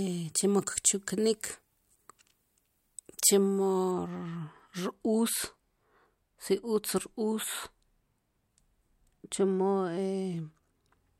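Speech, and from 3.91 s to the end the sound turns dull and muffled because de-emphasis was applied wrongly: a treble cut meant to undo pre-emphasis hit audio that never had any, or was applied a second time. The top end falls away gradually, reaching about 11 dB down at 10 kHz relative to 1 kHz. Unlike a low-pass filter or a codec's bandwidth limit, there is no sharp cut-off edge, just a steady downward tilt.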